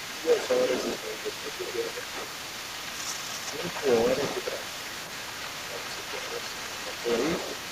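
From the very start at 0.0 s to the end, the other side's voice leaks through: a second voice sits roughly 10 dB under the speech, likely loudspeaker echo the canceller failed to remove. A spectrogram shows faint overlapping harmonic traces beneath the main voice.

Speech is suppressed in double talk at 0.07–0.49 s, 0.98–2.16 s, 2.83–2.97 s, 3.51–3.87 s and 5.68–6.02 s, likely because the canceller turned everything down while both sides spoke. The voice dips by about 10 dB first, then about 5 dB, showing as waveform notches and darkened spectrogram bands.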